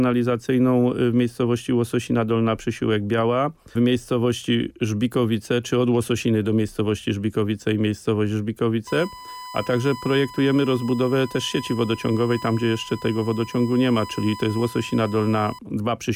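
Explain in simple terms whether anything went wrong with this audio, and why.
From 8.87 to 15.59 seconds a steady, high-pitched whine sits under the sound at 1 kHz. This is USB whine: a USB connection draws power in regular one-millisecond bursts, and that rhythm leaks into the audio wiring as a fixed tone.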